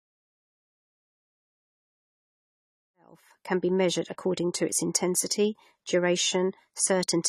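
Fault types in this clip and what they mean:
AAC compression, throughout: the speech sounds dull and smeared, with plainly audible warbling and nothing above 14 kHz, likely from AAC-LC coding at a low bitrate around 32 kbps, which quantises each frame's spectrum coarsely. It persists through the smooth fade-in ending at 3.76 s.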